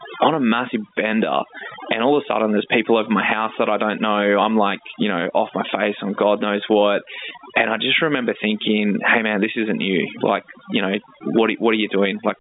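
From start to finish the speech carries overdone noise removal. The reduction was set far too hard. Bands near the noise estimate get cut to nothing, taking quiet parts of the voice too. Gaps fall to near silence with twinkling specks.

Gain pumping also runs through the whole clip. The gain ducks under each loud syllable, swinging around 20 dB. Levels sit squashed together. The likely cause is input gain set far too high, with a fast limiter clamping down. The telephone band, topping out near 3.8 kHz, comes through as expected.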